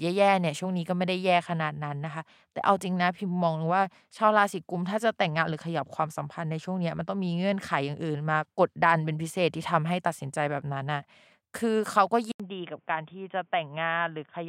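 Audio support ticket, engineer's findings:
Input switched to a poorer device, 12.32 s to end. 80 ms dropout, then audio band-limited, nothing above 3.6 kHz: dull, boxy. Level about 5 dB lower; new noise floor roughly 40 dB below signal. Likely cause: capture rerouted to a lower-grade mic or headset call profile with a narrower passband, different gain and its own self-noise.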